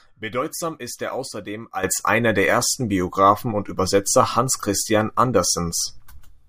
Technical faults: sudden gain jump

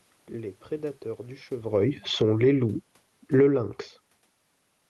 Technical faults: automatic gain falling; automatic gain rising

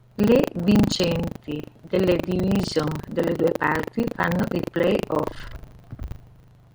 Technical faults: buffer tearing

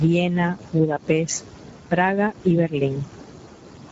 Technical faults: Speex codec

